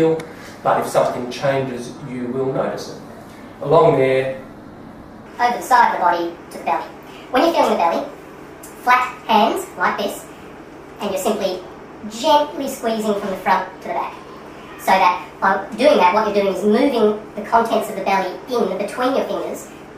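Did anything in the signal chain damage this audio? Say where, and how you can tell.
Yes. From 5.26 s onward, the sound runs 1.43 times fast and about seven semitones high: a section at the wrong speed, likely a playback clock mismatch.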